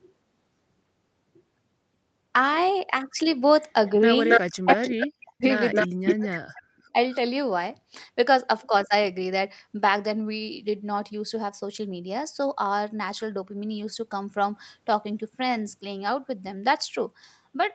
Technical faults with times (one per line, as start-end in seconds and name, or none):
4.29-4.41 echo leak
4.49-5.45 speech suppressed in double talk
4.69-5.06 echo leak
5.71-6.39 echo leak
5.83-6.94 speech suppressed in double talk
7.11-7.16 echo leak